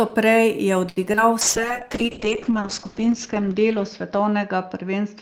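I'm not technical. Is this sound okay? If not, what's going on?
No. At 0.89 s there's a short stall from a late packet: the sound is held about 0.07 s too long while the receiver waits, then continues where it left off.

From 1.12 to 1.19 s, two back-to-back short concealed packet losses: the receiver fills the missing bits by extending the preceding sound, giving a brief smear.

From 1.43 s to the end, a call bitrate drop: the connection gets far less data, so the sound turns rough and muffled, with the crisp upper range cut away.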